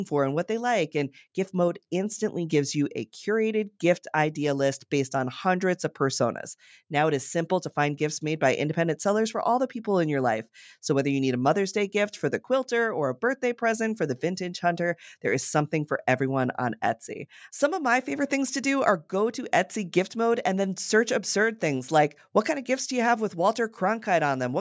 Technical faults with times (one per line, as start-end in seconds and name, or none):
none